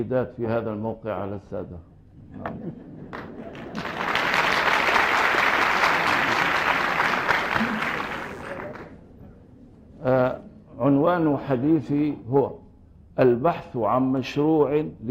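A switching source such as a dimmer or rectifier, or a missing shield, lets sharp spikes on the 60 Hz mains into the audio path from 4.80 to 8.45 s, producing mains buzz: a steady, raspy tone rich in 60 Hz harmonics, sitting around 30 dB below the main sound.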